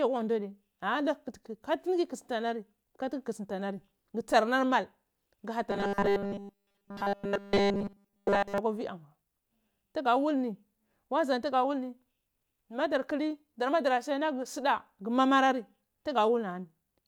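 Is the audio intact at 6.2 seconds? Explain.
No. From 5.71 to 8.58 s, just before "akwa ywii", the speech has robotic sound from repeated short buffers. The likely cause is audio arriving too seldom, so nearly every moment replays a short buffer. That locks a rigid, metallic 200 Hz buzz onto the speech.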